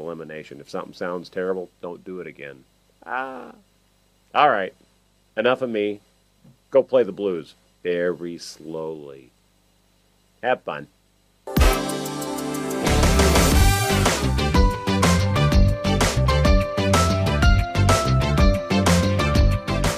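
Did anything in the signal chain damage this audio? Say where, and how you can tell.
Yes. Through the whole clip there is video or display buzz, picked up in the analogue wiring: a 50 Hz field-rate buzz with hash above it and a thin 15.6 kHz line-rate whistle, about 40 dB below the signal. Plain mains hum would lack that whistle and the hash.

At the codec or storage stage, compressed frames were skipped at 16.16 s and 17.77 s. The audio jumps ahead by roughly 50 ms and 20 ms, which fits two frames and one frame going missing.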